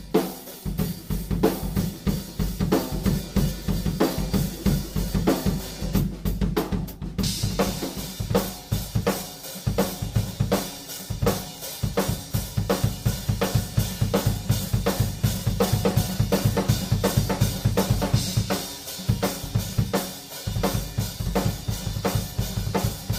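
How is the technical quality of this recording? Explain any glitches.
No glitches or technical faults can be heard anywhere.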